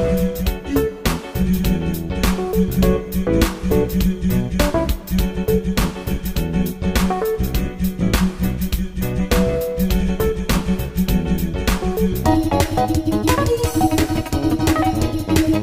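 At 12.24 s, the last stretch of the audio suddenly jumps into a section at the wrong speed and stays there until the end. It plays about 1.71 times faster than it should, so everything sounds hurried and climbs close to ten semitones, almost an octave higher. Because pitch and tempo shift together at one instant, the likely cause is that this part was fitted to the wrong clock during editing or playback.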